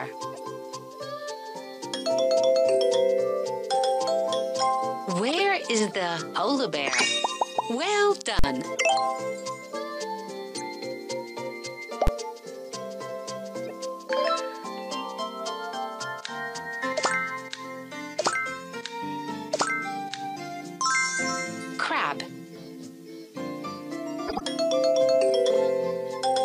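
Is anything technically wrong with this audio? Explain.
Yes, three kinds of digital fault are audible.

Compressed frames skipped, between 0.30 and 0.43 s: a few tens of milliseconds of audio, around 30 ms, never play, so the sound jumps forward by whole frames. On a waveform the envelope shows a small discontinuity. A spectrogram shows a brief vertical smudge where the content shifts abruptly.

Corrupt frame decoded, at 5.28–5.40, 6.97–7.02, 8.76–8.81, 10.55–10.60, 13.65–13.71 and 24.28–24.41 s: damaged frames were decoded anyway. Misread gains and codes put energy in the wrong frequency regions for the length of each frame, heard as chirps, squeaks and noise bursts. The longer ones at 5.3 and 24.3 s span about five frames. The loudest errors, near 7.0 and 8.8 s, reach about -10 dBFS. On a spectrogram these appear as short, blocky patches of misplaced energy with hard edges at frame boundaries.

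Invalid numbers at full scale, at 8.39–8.44 s and at 12.07 s: a calculation produced invalid values that were pinned to the maximum sample value for a whole block. The first lasts about 46 ms, which fits a 2048-sample block, and gives a loud pop at each end with nothing between. The second, 12 ms long, fits a 512-sample block and is a single bang. A waveform shows a flat rectangle far beyond the audio's peaks, and a spectrogram shows broadband vertical lines at its edges.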